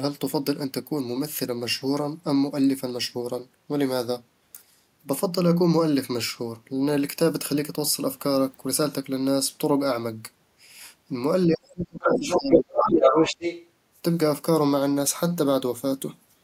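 At 11.47 s the talker's level sinks, bottoming out around 25 dB down, and stays ducked until 13.35 s, roughly two seconds in all. That's speech suppressed in double talk, likely the echo canceller failing to separate the talker from loudspeaker echo and turning both down.

From 12.01 s to 13.66 s a second voice comes through, sitting a few dB above the talker. That's the other side's voice leaking through, likely loudspeaker playback the echo canceller didn't fully strip from the microphone.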